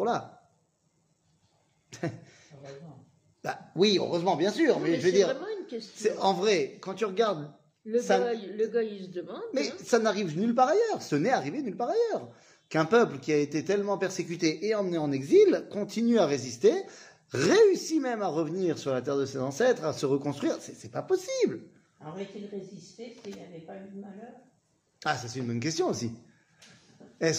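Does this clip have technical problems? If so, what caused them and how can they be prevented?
Yes, there's a single sharp click at 17.89 s from dropped samples. A handful of samples, about a tenth of a millisecond, went missing, so the waveform jumps straight to a later value. It's likely a brief buffer hiccup in capture or transfer. Giving the audio path more buffer headroom should prevent it.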